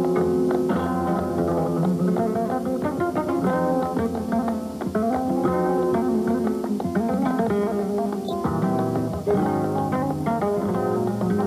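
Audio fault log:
8.25 to 8.32 s, corrupt frame decoded. A short burst of noise cuts in for about 0.06 s. It peaks at about -20 dBFS. The damage fits a single compressed frame. Some of its bits were flipped, yet the decoder played it anyway. Misread codes and gains placed energy at the wrong frequencies. That is why a foreign blip appears, lasting roughly one frame.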